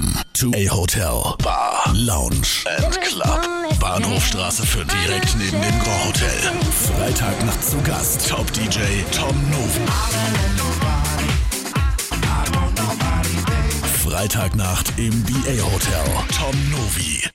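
Short blips of damaged data in a compressed stream occur at 0.51, 4.88, 7.50–7.52, 9.75–9.78 and 12.47–12.49 s. Corrupted frames make the decoder lose sync.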